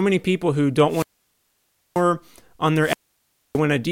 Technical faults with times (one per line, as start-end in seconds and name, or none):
0.88-2.04 wireless microphone squelch dropout
2.81-3.60 wireless microphone squelch dropout